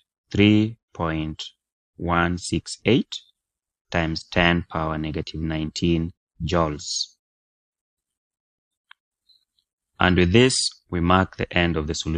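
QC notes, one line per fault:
No faults heard anywhere in the audio.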